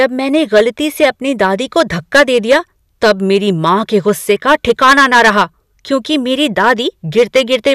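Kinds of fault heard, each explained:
Hard clipping: speech driven about 10 dB past full scale, roughly 3% of samples flattened; waveform shows squared-off peaks, spectrogram shows broadband harmonic smear above loud syllables.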